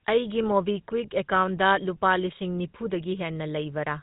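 Throughout, GSM full-rate codec coding gives the speech a buzzy, gravelly roughness, fitting roughly 13 kbps; spectrograms show a hard ceiling near 3.8 kHz, with nothing above.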